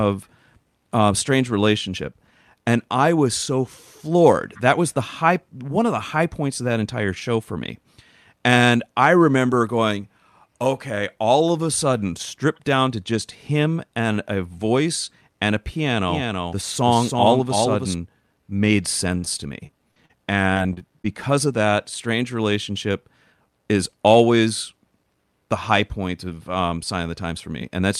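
From 16.08 to 17.94 s, after "a voice and a", a doubled audio track appears. A copy about 5 dB quieter trails by roughly 300 ms, likely a second, slower capture path.

From 19.17 to 21.06 s, before "of that", repeated packet loss makes the speech choppy, with pieces missing. Short holes, the longest 56 ms, are patched by stretching the preceding sound.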